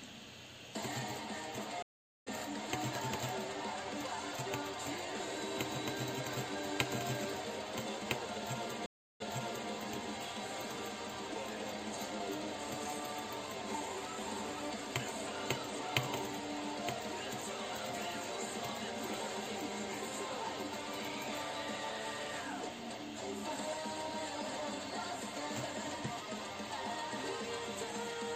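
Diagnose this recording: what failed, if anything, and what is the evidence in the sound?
The stream reconnected twice at the network stage. From 1.82 to 2.28 s the sound stops for 442 ms and comes back roughly a third of a second further on, so some material is skipped. From 8.86 to 9.71 s a 341 ms silence is followed by a restart 511 ms earlier, repeating a stretch already heard. That jump in position, forward once and backward once, after true silence, distinguishes a dropped connection and fresh decoder start from a packet-loss gap, which keeps the timeline intact.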